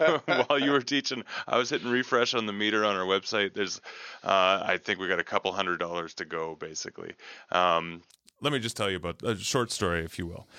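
From 0 to 8.10 s the speech is band-limited, with nothing above 6.6 kHz. It sounds dull and boxy, then suddenly clears. The input likely switched to a poorer device. There is no gap, the level barely shifts, and faint noise sits far below.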